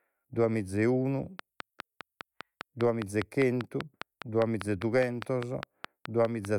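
From 1.39 s, after "duemiza e unu", to 6.46 s, a train of clicks ticks regularly about five per second, around thirty similar pulses, likely external interference, seen as evenly spaced vertical spectrogram lines and sharp waveform spikes.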